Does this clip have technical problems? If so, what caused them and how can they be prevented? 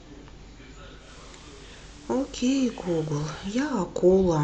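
Yes. From 0.95 s to 3.82 s the receiver performs a digital radio blend to analogue FM, cross-fading over about 176 ms each way. Level drops about 1 dB, and hiss sits roughly 25 dB below the speech, visible as a raised broadband noise floor on a spectrogram. Improving reception or fixing the receiver to digital-only prevents this.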